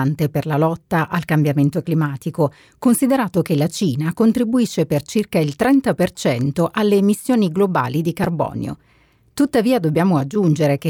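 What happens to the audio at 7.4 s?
Nothing goes wrong at 7.4 s; the speech carries on intact there, with no dropout, click or distortion.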